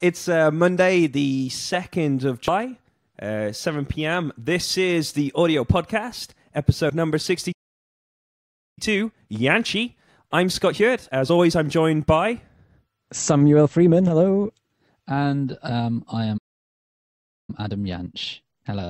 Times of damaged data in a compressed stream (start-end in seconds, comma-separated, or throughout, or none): 2.48